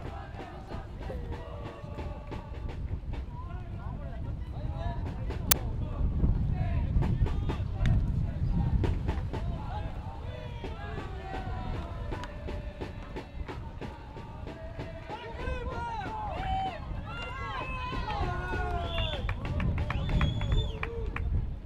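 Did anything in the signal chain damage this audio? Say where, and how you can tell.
Yes. An uninitialised buffer at 5.51 s, in the driver or buffer stage, plays a loud crack lasting about 10 ms, where stale memory was output as samples.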